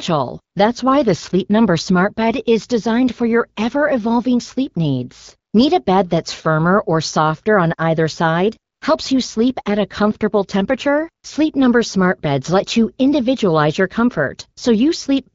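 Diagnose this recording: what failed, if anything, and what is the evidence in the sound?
The fault sits in the codec stage: AMR comfort noise, from discontinuous transmission. At 5.51 s, and again from 8.73 to 8.81 s, the real background drops out for about 20 ms and then 80 ms and is replaced by smooth, steady synthetic hiss. On a spectrogram these are small patches of flat, texture-free noise with abrupt vertical edges. The waveform shows an even noise floor. The sender briefly judged the line silent and stopped sending speech frames, so the receiver generated noise from a rough level-and-spectrum description. This happened inside an AMR wideband stream at 12.65 kbit/s.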